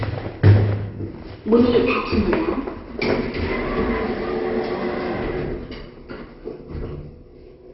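Throughout, the audio was most likely squeezed through MP2 compression at a very low rate, around 32 kbps judging by the damage, starving the upper sub-bands of bits. Nothing survives above 5.6 kHz, so the sound is dull, with a heavy gurgling, granular texture.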